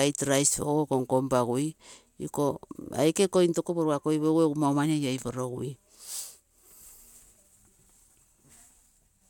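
No technical faults can be heard anywhere in the speech.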